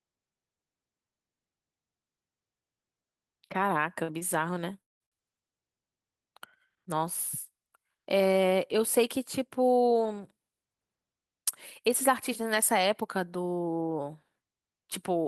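Right around 4.03 to 4.13 s there's a short stall from a late packet. A packet showed up late, the jitter buffer ran dry, and the receiver stretched the last bit of sound by about 49 ms. It also trimmed about 13 ms to catch back up. Nothing's actually lost, but the speech hangs for a moment with a faint buzzy smear. Then at 4.19 to 4.24 s the same thing happens again, smaller this time, an 18 ms hold.

From 4.81 to 5.03 s it gets worse. The sound trails off into a fading buzz and then drops to silence, and about 0.18 s of speech never comes back. The speech resumes past the gap. That's likely a long network dropout, where nothing arrived for that stretch, so the receiver padded what it could and skipped the rest.

Right after the speech returns, from 5.06 to 5.15 s, there's one more short stall from a late packet, a roughly 59 ms stretch of held sound while the delayed packet catches up.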